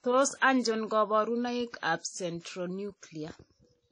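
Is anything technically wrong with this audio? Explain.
Yes. Throughout the speech there is plainly audible WMA compression damage, likely from a low-bitrate encode. Long transform blocks smear quantisation noise, giving washy ringing and hiss that breathes with the signal, consistent with roughly 32 kbps. A spectrogram shows nothing above 10.1 kHz and patchy gaps where weak components vanished.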